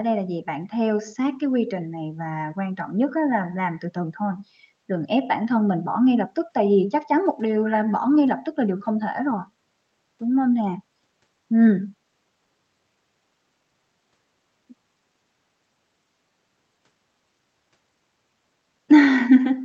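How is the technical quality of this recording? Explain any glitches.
No glitches can be heard in the speech: it carries the band-limited sound of a WebRTC call path, with content stopping around 8 kHz in a way that fits Opus at a moderate call bitrate.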